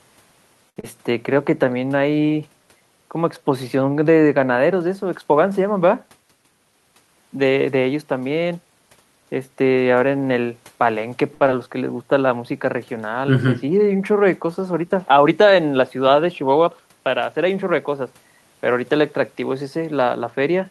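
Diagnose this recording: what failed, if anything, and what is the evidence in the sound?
Speech hangs on a held, slightly buzzy sound at 0.69–0.78 s and again at 11.34–11.43 s, stretched by 70 ms and 66 ms. This is a short stall from a late packet in the network and jitter-buffer path. The buffer ran dry, the receiver extended the last sound, then resumed without losing anything.

Right after each stall comes a brief smear: 0.80–0.85 s and 11.47–11.50 s. This is short concealed packet loss. About 40 ms and then 20 ms of audio never arrived in time, so the decoder bridged the holes by continuing the preceding sound and blending back into the real signal.

Delivery sounds hurried but keeps its pitch at 6.51–7.08 s (111% speed) and 16.92–17.63 s (108%). This is a jitter buffer speed-up. After delayed packets piled up, the receiver trimmed small pitch-period slices, roughly 70 ms each time, to bring latency back down.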